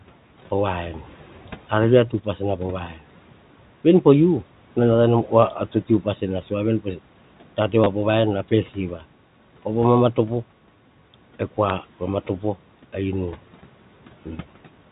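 Packet loss with last packet repeated hits this telephone-band speech recording twice: the receiver lost audio and filled each gap by replaying the previous chunk. At 7.84 to 7.86 s about 20 ms goes missing, which fits two 10 ms packets, and at 11.69 s a 10 ms gap fits a single packet. Because the replayed chunk repeats at the packet rate, the first gap gives a short robotic stutter and the second a small blip, under room noise about 23 dB below the speech.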